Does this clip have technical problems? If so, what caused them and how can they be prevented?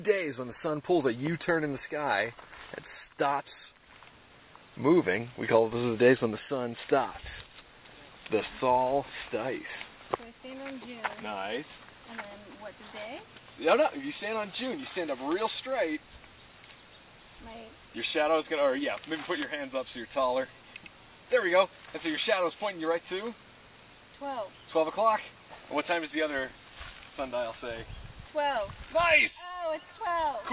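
No, there are no technical problems to fix here.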